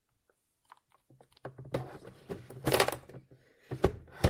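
Nothing stood out on listening to this recording of sounds.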